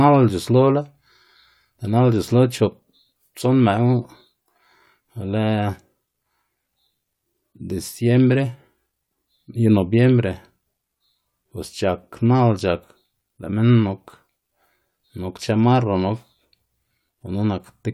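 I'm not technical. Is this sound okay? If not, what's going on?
Yes, nothing in this recording points to a technical fault.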